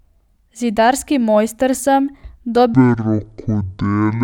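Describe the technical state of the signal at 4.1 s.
At 4.1 s the speech is in a section at the wrong speed, from 2.74 s to the end. It plays at half speed, likely from a wrong clock, sounding slow and roughly ten semitones deeper.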